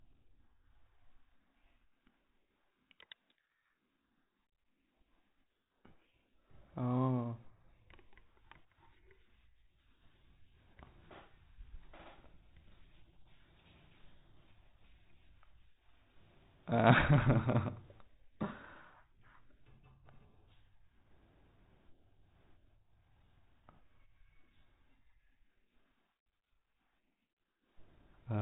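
No technical faults can be heard in the speech. It carries the band-limited sound of telephone-grade G.726 ADPCM at 32 kbit/s, with nothing above about 3.8 kHz and only light coding roughness.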